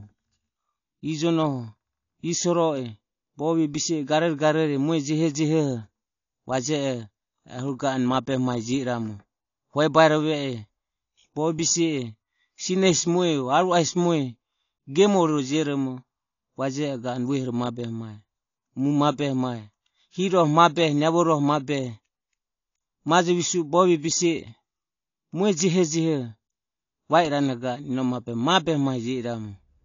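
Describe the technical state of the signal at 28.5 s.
At 28.5 s the speech carries the same damage heard across the whole clip: nothing reaches above 7.1 kHz, and sibilants and sustained vowels take on a fizzy, warbling smear. This is likely AAC compression, with a heavy bitrate squeeze (the damage fits roughly 32 kbps) forcing the encoder to drop the top band and coarsely quantise, or noise-fill, what remains. A simple low-pass filter would dull the top just as cleanly but leave no warble behind.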